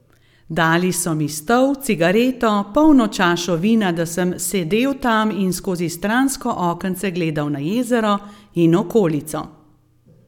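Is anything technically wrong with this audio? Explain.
No, nothing technically wrong is audible in this recording.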